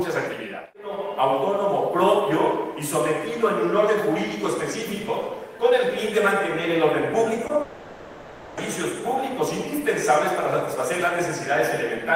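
At 7.47 to 7.51 s there's a short concealed packet loss: about 20 ms of audio didn't make it to the decoder in time, so the receiver stretched the preceding sound across the gap and blended back in. You hear a quick smear or wobble.

Right after, from 7.61 to 8.59 s, the sound turns into a drawn-out continuation of what came before, a buzzy or hissy fill that fades but never drops to silence. That's likely a long network dropout, with nearly a second of real audio replaced before things resume.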